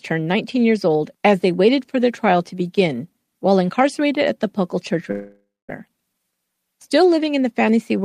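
From 5.11 to 5.70 s speech dissolves into a fading buzz, then silence, and resumes with 0.58 s lost, likely a long network dropout.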